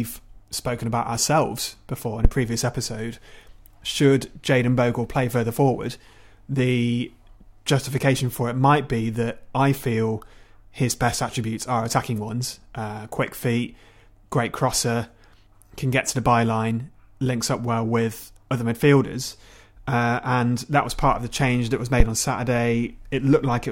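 At 2.25–2.30 s, after "about ourselves before in", and 22.00–22.06 s, after "the change that was", phantom power thumps: a supply switching on or off on the live input sends a step through the coupling capacitors. Each is a deep thump peaking at about −2 dBFS and decaying within 13 ms. It shows as a tall waveform spike and a low-frequency smear on the spectrogram.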